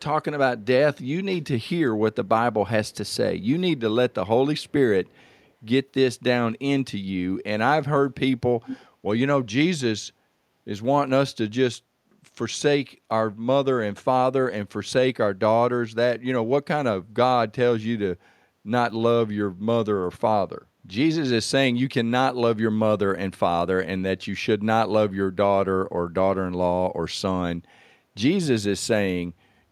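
From 2.88 to 3.15 s, 4.60 to 4.72 s and 5.08 to 5.51 s, a very faint copy of the speech trails about 332 ms behind. This is an echo leak, likely from a far-end echo canceller letting loudspeaker pickup through.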